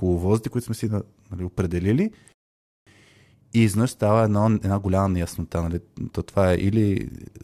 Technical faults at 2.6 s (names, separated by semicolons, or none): rebuffering stall